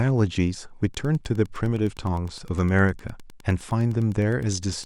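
From 0.87 s to the end, Wi-Fi interference ticks steadily every 102.4 ms, about ten a second, quietly below the speech; that exact beacon rhythm separates it from random crackle.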